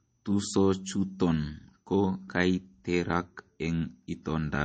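Right from the start and all the way through, the speech has a hard ceiling at about 8.4 kHz, with the swirly, smeared texture of a heavily squeezed MP3. That's the signature of low-bitrate audio saved at a high bitrate: the damage sounds like a very low-rate encode, somewhere around 32 kbit/s, that was likely re-saved at a generous rate. The bigger file can't bring back the missing top end or undo the smearing. It just carries them along.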